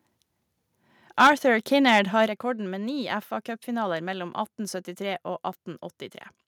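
From 1.2 to 1.3 s the speech hits microphone overload. Peaks run about 9 dB past the converter's ceiling. Roughly a sixth of the samples have their tops sliced flat. This likely comes from an input volume set too high. It sounds like a harsh, crackly edge on the loudest syllable.

At 1.27 s the microphone volume is stepped down by about 4 dB. Voice and background drop together, at once. This is likely the call software reacting to that distorted peak by cutting the device's input level.

From 1.87 to 1.99 s, just before "har rekorden med ni", there is a milder overload. Peaks exceed the limit by about 3 dB. Only a small fraction of samples are flattened. A brief roughness rides on the peak. The likely cause is again input gain still too hot.

At 2.28 s, right before "rekorden med ni", the level steps down again, by about 6 dB. The whole sound becomes quieter in one jump. This is likely a second automatic gain cut following the clipping.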